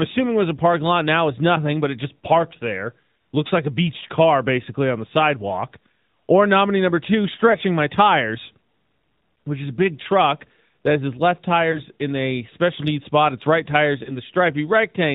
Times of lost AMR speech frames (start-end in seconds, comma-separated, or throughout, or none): 7.52-7.56, 11.72-11.81, 14.04-14.12